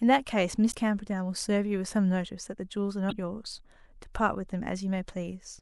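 A brief blip interrupts the speech at 0.70 s, lasting about 54 ms until 0.75 s, and a second one follows from 3.08 to 3.13 s, about 44 ms long. Both come from damaged data in a compressed stream: bytes in the encoded file were lost or corrupted at those points, so the decoder misread the affected frames, lost sync, and had to search for the next valid frame header before clean audio resumed.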